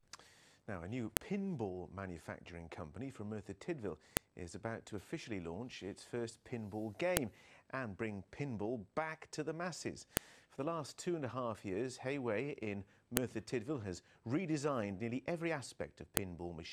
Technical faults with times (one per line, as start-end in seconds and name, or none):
1.17 file header played as audio
4.17 file header played as audio
7.17 file header played as audio
10.17 file header played as audio
13.17 file header played as audio
16.17 file header played as audio